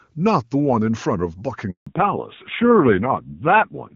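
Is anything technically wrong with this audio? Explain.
Yes, there are two related faults in this speech clip. From 1.71 to 1.87 s there is a handover gap: for about 160 ms the voice dies away quickly and leaves plain silence while the call is passed from one network to another and no speech frames arrive. Packet loss with concealment would fill a dropout with smeared or repeated sound. This is a clean hole, and whatever was said during it is simply gone.

From 1.87 s to the end there is a fallback to narrowband. Before the gap, the HD Voice coding sounds full and bright, which fits AMR-WB at a high rate such as 23.85 kbit/s. After the gap, nothing remains above 4 kHz, and the voice turns dull and rough. That roughness points to a low-rate narrowband codec, something like AMR-NB at 5.9 kbit/s. A plain low-pass filter would only muffle the sound. Here the sudden change at the gap and the added graininess show that the call switched to a different codec.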